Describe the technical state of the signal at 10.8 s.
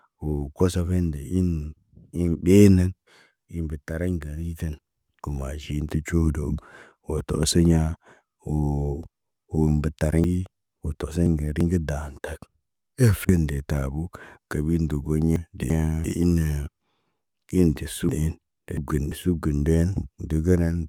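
At 10.8 s the speech sits inside a stretch of chunks out of order running from 10.24 to 11.61 s. A chunk of about 341 ms was delivered late and plays three chunks after its proper place, so the sound jumps ahead and then doubles back, with three hard joins. Unlike a dropout or a stutter, nothing is missing or repeated. The material is all there, only scrambled.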